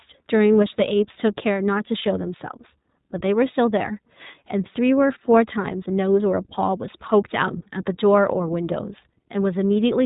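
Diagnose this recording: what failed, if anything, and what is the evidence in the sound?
iLBC codec, audible throughout the speech: a codec-stage fault. Nothing above about 3.8 kHz survives, so sibilants and consonant edges are dulled, and the voice has a plainly audible rough, slightly synthetic grain. The codec rebuilds each short frame's excitation on its own, without drawing on the previous frame, which produces this coarse texture. The coding rate and frame length fit iLBC's 15.2 kbps mode with 20 ms frames.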